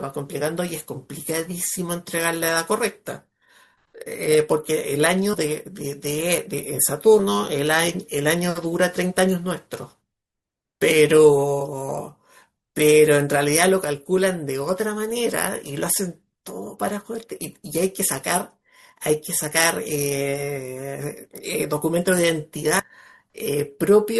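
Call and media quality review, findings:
Compressed frames skipped in the speech at 5.33–5.36 s, 7.19 s, 21.25 s and 22.79–22.86 s. The audio jumps forward by roughly 200, 100, 70 and 300 ms, which fits whole 20 ms frames dropped. Probably frames missing from the file, or the decoder discarding them as corrupt.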